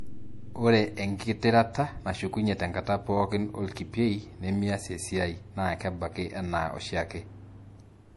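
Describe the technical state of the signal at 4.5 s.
At 4.5 s the speech sounds watery and swirly, with chirpy s sounds and nothing above 11.5 kHz, as it does throughout. This is likely MP3 compression at a starved bitrate, fitting about 48 kbps, where the encoder cuts the treble and weak frequency lines flicker between frames.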